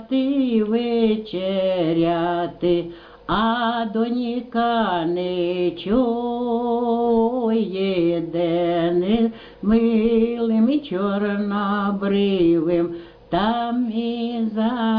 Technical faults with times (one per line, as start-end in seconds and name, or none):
none